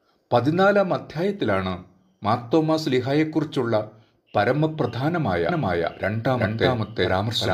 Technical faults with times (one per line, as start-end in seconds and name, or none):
5.49-7.54 doubled audio track